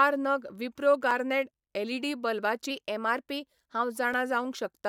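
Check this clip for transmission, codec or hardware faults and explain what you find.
Two kinds of fault are present: two blocks of digital silence and a drift correction step.

At 1.11 s, just after "नग विप्रो", a 4.4 ms run of samples went out as zeros. Another block of digital silence, only 1.23 ms long, drops in at 4.14 s. Because the signal cuts to zero and returns with no fade, each edge is a hard discontinuity. Both gaps are too short to hear as holes, so each comes across as a sharp tick in the speech.

From 2.71 s to 3.96 s the audio plays about 6% fast. Pitch rises by 101 cents, roughly a semitone, and then snaps back. This is likely a drift correction step, where software matching two clocks abruptly changed the playback rate to rebalance its buffer. Speed and pitch move together, so the speech sounds briefly hurried and raised before dropping back to normal.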